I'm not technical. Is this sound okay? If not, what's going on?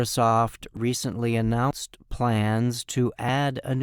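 No. The recording software most likely fell behind and failed to collect the audio in time, a dropped buffer (overrun), so the hardware overwrote a small piece before it was saved. The speech on either side is then joined directly, with no gap. You hear a sudden jump forward at 0.77 seconds, where a few hundredths of a second vanish, and again at 1.71 seconds, where about a tenth of a second is gone.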